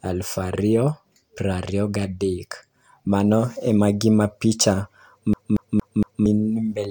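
From 5.33 to 6.26 s, the speech sticks like a CD stuck on one turn. A 0.23 s slice repeats four times, each jump marked by a brief mute.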